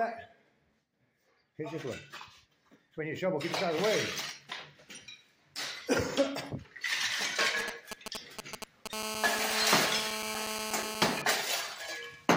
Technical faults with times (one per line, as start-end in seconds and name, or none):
7.21-8.88 GSM signalling bursts
8.93-11.22 GSM phone buzz